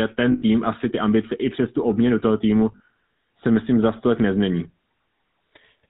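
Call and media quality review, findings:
GSM full-rate codec, whole clip: buzzy, gravelly speech, nothing above 4 kHz on a spectrogram, coarse pulse-driven harmonics. Plainly audible damage, consistent with 13 kbps GSM full rate.

Lost GSM frames, 0.32 to 0.43 s, before "asi ty ambice i": last good frame repeated, metallic ring over 100 ms. Smeared, flat spectral band. Second case at 2.72 to 2.88 s, between "tu obměnu toho týmu" and "se myslím za stolek": 80 ms of concealment scattered over 160 ms, longest run about 40 ms, short ringing patches.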